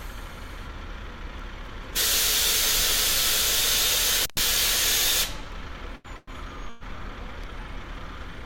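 A recording of everyday sounds with three kinds of fault. At 4.22 s an intermittent contact, a loose cable or plug momentarily losing connection, opens the signal path for about 114 ms. The sound drops out abruptly until 4.40 s, with crackle as the contact breaks and remakes, and the gap is not a clean silence but a thin residue where the line hangs open. At 5.95 s a short stall from a late packet follows. One packet missed its playout deadline, the jitter buffer emptied, and the receiver stretched the last sound for about 92 ms until the packet arrived at 6.08 s. Playback then resumed from the same point, so nothing is lost, but the sound is held unnaturally long and everything after it lands 92 ms later. Two call audio freezes follow, likely from packets delayed in transit until the jitter buffer ran dry. At 6.17 s the receiver extends the last sound as a fading buzz or hiss for about 109 ms, ending in roughly 10 ms of silence before the audio picks up again at 6.30 s. 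At 6.69 s the same happens for about 112 ms, with the extension running straight into the resumed audio at 6.84 s. Each freeze inserts a gap rather than removing sound.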